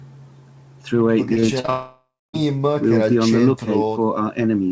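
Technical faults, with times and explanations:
1.34–1.70 s, repeated packet loss (robotic sound): five short holes, none longer than 40 ms, each patched by repeating the last sound. About a third of this stretch is filled in, giving a choppy texture rather than one long gap.
1.70–2.36 s, long network dropout: about 0.64 s of audio is missing. The last sound is stretched into a fading buzz or hiss, then about 0.25 s of silence follows before the audio resumes. This is one long hole, likely from lost network audio, unlike the brief repeated gaps just before it.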